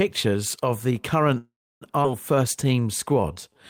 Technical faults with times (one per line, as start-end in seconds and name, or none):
1.37-1.83 call audio freeze
2.03-2.06 skip ahead
2.35-3.53 jitter buffer slow-down